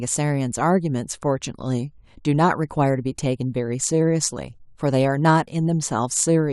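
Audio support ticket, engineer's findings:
Checked full clip; no fault found.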